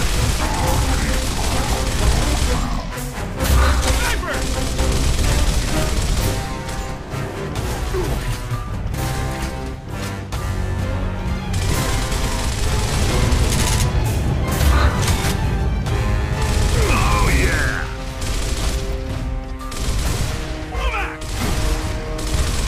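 Nothing stood out as a technical fault on listening to this audio.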